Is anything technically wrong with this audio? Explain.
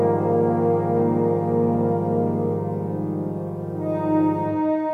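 No, nothing technically wrong can be heard here: the signal stays steady and intact throughout, with no audible disturbance at any point.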